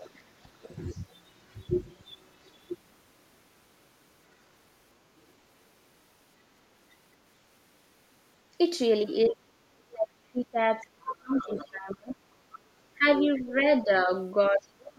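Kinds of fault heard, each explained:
Other side's voice leaking through: Between 0.0 and 1.7 s, at 2.08 to 2.51 s, 10.81 to 11.71 s, 12.51 to 12.59 s and 13.18 to 13.42 s, a faint second voice sits under the speech. It is mostly about 25 dB down, rising to about 15 dB below at 10.81 to 11.71 s. This is likely loudspeaker playback reaching the microphone and not fully removed by the echo canceller.
Speech suppressed in double talk: At 0.1 to 0.49 s, 9.29 to 12.18 s and from 12.98 s to the end, the speech sinks in places while the other side is also present. The dips are about 20 dB in the short first stretch, which is affected for only a brief moment. The second stretch drops about 35 dB over roughly two seconds, and the last about 30 dB over roughly one second. This is likely the canceller turning everything down when it cannot separate the two voices.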